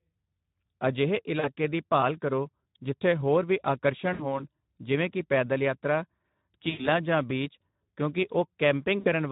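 Speex codec damage runs through the whole speech clip. The hoarse, noisy texture fits a bitrate of about 11 kbps, where the CELP excitation is starved of bits.

VoIP packet loss concealed by the speech codec first occurs at 1.39 to 1.50 s, just before "ਦੀ ਭਾਲ ਕਰੋ ਜਿੱਥੇ". About 40 ms of audio went missing, and the decoder extrapolated from its last pitch and filter, lowering the gain frame by frame. It recurs at 4.13 to 4.43 s, between "ਕਰੋ ਜਿੱਥੇ ਹੋਰ ਵੀ" and "ਜਿਵੇਂ ਕਿ ਪੈਦਲ ਯਾਤਰਾ", covering about 60 ms. The longest gap, about 100 ms, comes at 6.69 to 6.89 s before "ਜਾਂ ਬੀਚ ਕਿਉਂਕਿ". A final gap of about 60 ms falls at 8.99 to 9.08 s. Each time, the speech stays weak or distorted briefly after the stream resumes.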